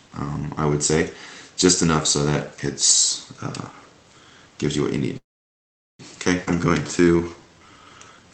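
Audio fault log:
5.17 to 6.01 s, call audio freeze: The sound stops and a brief buzzy continuation of the last moment fades almost immediately into silence, which lasts about 0.77 s of the 0.82 s pause. Afterwards the audio resumes exactly where it left off, so nothing is lost, only delayed. The likely cause is delayed packets draining the jitter buffer, with the receiver stretching the final sound until it died away and then waiting.
6.45 to 6.49 s, skip ahead: Playback lurches forward with only a tiny 15 ms join, and roughly 0.4 s of audio simply vanishes. The material on either side of the cut is butted together almost directly, so the jump sounds abrupt rather than gappy. This is a stretch of audio being dropped while later audio was already waiting, cutting the latency by around 0.3 s.
6.55 to 8.29 s, jitter buffer slow-down: From here to nearly the end the audio drags, running at about 84% speed while the pitch stays put, with elongated sounds. 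The receiver is inserting 279 ms of repeated pitch periods and pause fragments to rebuild its reserve. That repetition produces the stretched texture, heard through the Opus call path, whose coding limits the audio to 8 kHz.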